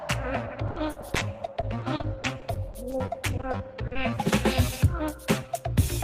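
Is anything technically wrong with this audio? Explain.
Yes, there are three problems. From 0.67 to 3.97 s there's repeated packet loss, and it gives a robotic sound. Audio keeps dropping out in 26 gaps, the longest about 60 ms. Each gap is papered over by stretching the last bit of sound, which covers roughly 18% of that stretch and leaves it choppy with pieces missing.

Overlapping the tail of that, from 3.48 to 4.25 s, there's a jitter buffer slow-down. The receiver was short on buffered audio, so it repeated tiny pitch-period chunks to rebuild its reserve, adding 72 ms. Playback drops to 92% speed at unchanged pitch, so things sound drawn out.

Then from 5.11 to 5.66 s you get a jitter buffer speed-up. With too much audio queued, the receiver trimmed short pitch-period slices, around 50 ms in all, to cut the delay. That pushes playback to 107% speed at the same pitch, and it comes across as hurried.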